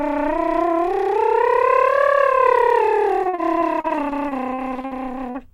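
From 3.23 to 5.07 s the music breaks up with repeated packet loss, giving a robotic, choppy sound. Seventeen gaps, the longest 58 ms, are each patched by extending the preceding audio, so about 22 percent of that stretch is synthetic fill with a stuttering texture.

At 5.30 to 5.36 s there is a short concealed packet loss: roughly 40 ms never arrived, and the receiver bridged the hole by continuing the last sound before crossfading back. It is heard as a brief smear or wobble in the music.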